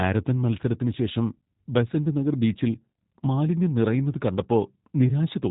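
Throughout, the speech has been squeezed through a G.729 codec, rebuilt frame by frame from a vocal-tract filter, pitch predictor and sparse pulses, which fits an 8 kbit/s VoIP link. Everything above 3.8 kHz is gone, leaving the speech dull, buzzy and faintly artificial.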